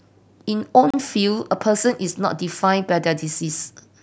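A block of digital silence runs from 0.90 to 0.94 s: for 32 ms the speech drops out to silence, which fits a 512-sample buffer left unfilled in time. The abrupt cut and return are heard as a brief hole.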